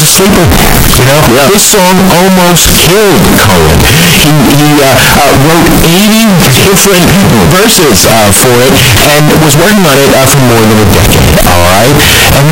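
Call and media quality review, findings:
Float read as integer, throughout. Speech near-square and harsh at a near-fixed high level regardless of level; background noise as loud as speech, pitch still followable. Likely 32-bit float samples decoded as 32-bit integers, sign and exponent bits dominating amplitude. Check decoder sample-format flag.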